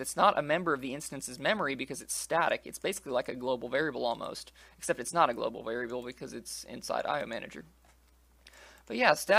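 No technical faults can be heard anywhere in the signal.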